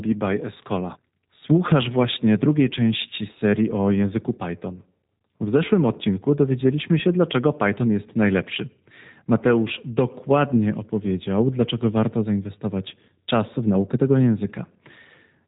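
The clip is speech carrying G.729 codec damage from start to finish, plainly audible throughout. The codec models each 10 ms frame with a vocal tract filter, a pitch predictor and a sparse set of pulses, so the voice is resynthesised rather than preserved, giving it a rough, synthetic texture. Nothing is present above 3.8 kHz, leaving the speech band-limited, and the coding texture fits the 8 kbit/s G.729A variant.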